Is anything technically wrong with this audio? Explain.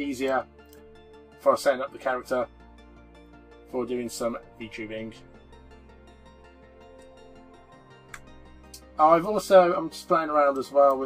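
No, nothing technically wrong turns up here; it all sounds fine to the ear.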